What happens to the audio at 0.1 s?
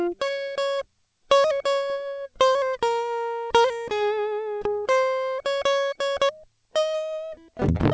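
Nothing goes wrong at 0.1 s: the music there is intact, carried by the call path with its band ending at 8 kHz, which fits a G.722 codec.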